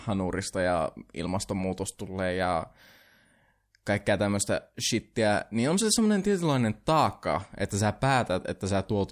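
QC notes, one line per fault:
Nothing to flag here, as the speech comes through with no problems worth a line.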